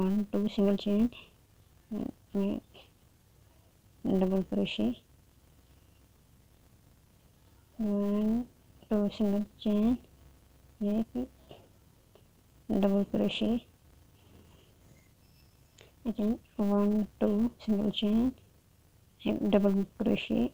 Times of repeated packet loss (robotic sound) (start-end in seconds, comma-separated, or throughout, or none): none